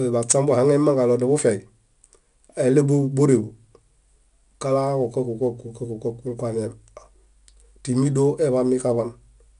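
From start to finish, the speech carries 4-bit ADPCM compression. Each sample is stored as a small coarse step from a predicted value. The step size adapts to the level. The leftover error is a broadband noise that rises and falls with the speech. It is plainly audible as a gritty hiss riding on the louder syllables. Nothing is present above 10.6 kHz. That cut-off points to a reduced sample rate, which fits a bitrate near 89 kbps.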